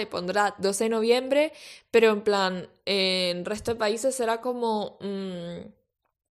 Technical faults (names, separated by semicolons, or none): none